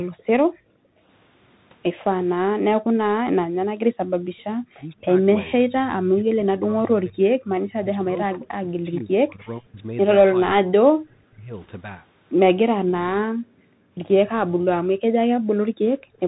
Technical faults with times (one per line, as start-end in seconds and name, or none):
0.00-16.28 Bluetooth CVSD headset codec
0.00-0.47 background gated by the echo canceller
0.75-0.79 speech suppressed in double talk
2.79-2.90 background gated by the echo canceller
4.11-4.33 background gated by the echo canceller
4.39-4.43 echo leak
4.80-11.53 speech suppressed in double talk
8.95-9.01 echo leak
13.32-16.19 background gated by the echo canceller